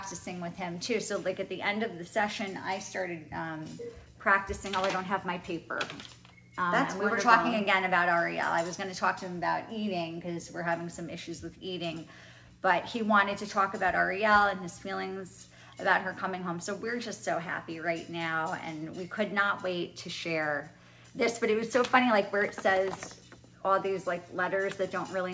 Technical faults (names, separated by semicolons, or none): none